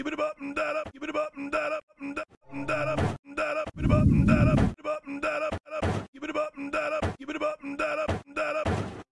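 No technical faults can be heard anywhere in the audio.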